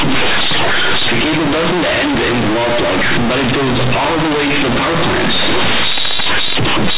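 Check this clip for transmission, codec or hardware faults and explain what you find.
One fault runs through the whole clip: the speech comes out as harsh, overloaded buzzing, with loud noise filling the pauses. This is companded audio read as linear. The mu-law bytes are being played back as plain 8-bit samples without expansion. Because the logarithmic code is treated as a straight scale, every sign change throws the output across roughly half its range. Quiet passages become as loud as peaks and the waveform is badly bent. Underneath, the G.711 telephone coding itself works as it should, and the bandwidth stops at 4 kHz.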